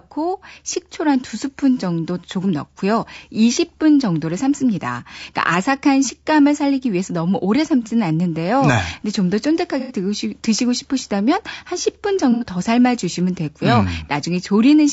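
Throughout the recording, the speech carries the marks of low-delay AAC compression, likely AAC-ELD at a low bitrate that fits about 32 kbps. Its short frames resolve voice harmonics poorly, so the speech sounds plainly rough and grainy, with noise filling between harmonics and a thin, synthetic top band.

At 9.80 to 9.95 s and again at 12.32 to 12.45 s, there is AAC frame loss with concealment. Each gap is about 90 ms, which fits three lost frames. The decoder rebuilt the missing audio from the preceding spectrum, leaving a brief smeared, noisy, phasey patch.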